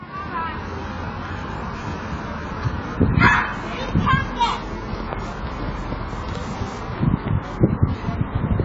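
Throughout, the sound is dull and smeared with nothing above 7.7 kHz, likely heavy AAC compression at a very low bitrate, consistent with roughly 16 kbps AAC-LC. From 4.54 s to the end, Wi-Fi interference adds steady ticking every 102.4 ms, the radio's beacon rectified by the audio circuit, roughly 30 dB below the sound.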